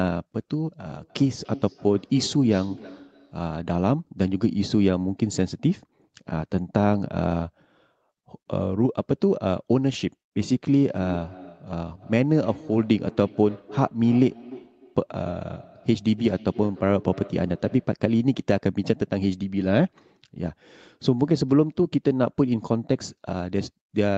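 From 0.91 to 3.77 s and again from 10.74 to 18.02 s, the speech comes back as a feedback echo between two devices. A second device in the room replays the call, the first microphone picks it up, and that device's echo canceller cannot remove sound it did not play. The copy returns at a fixed interval of roughly a third of a second, at about 17 dB and then about 20 dB below the speech. Room reverberation would instead blur into a continuous tail.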